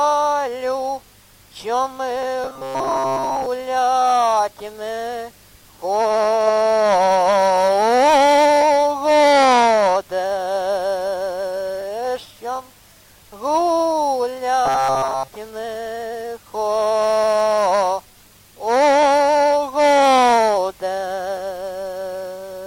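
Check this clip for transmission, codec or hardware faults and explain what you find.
Two bursts of robotic sound from repeated short buffers occur, from 2.44 to 3.47 s and from 14.66 to 15.28 s. New audio likely arrived too seldom, so a fragment of about 7.5 ms was looped through most of each stretch, stamping a rigid, metallic 133 Hz buzz over the sound.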